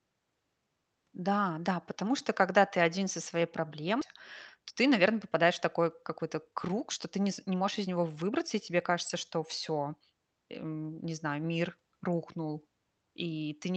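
At 4.01 to 4.03 s the speech skips ahead. About a second of audio was dropped, and the two sides join almost directly with no filled gap.

From 4.57 to 8.31 s a jitter buffer speed-up follows. Short pitch-period pieces are cut repeatedly, so speech runs 6 percent faster at unchanged pitch, sounding slightly hurried.

Both play through an Opus call path limited to 8 kHz.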